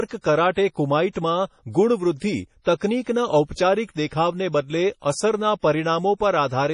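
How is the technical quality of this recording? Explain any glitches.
Technical quality is poor. Heavy compression damage runs through the whole recording, and that's the main problem.

It sounds like MP3 compression, most likely at a low bitrate, somewhere around 32 kbps. There's nothing above 10.5 kHz because the encoder chopped off the treble to save bits. The remaining spectrum is starved too, so weak frequency components flicker in and out from frame to frame. The speech comes across watery and swirly, with chirpy, metallic s sounds and soft, smeared consonant attacks.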